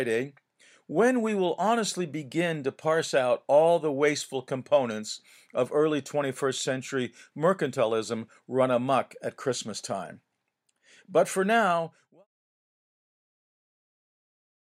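Nothing stood out on listening to this speech, and the level eases away in a smooth fade-out that begins at around 11.5 s and is complete by 12.27 s.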